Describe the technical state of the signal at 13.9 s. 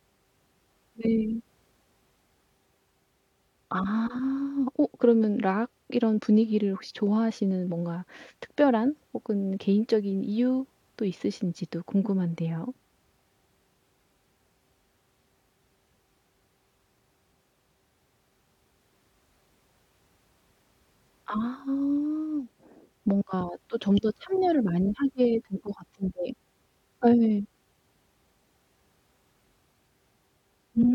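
At 13.9 s the speech signal is intact, with no fault to be heard at that moment.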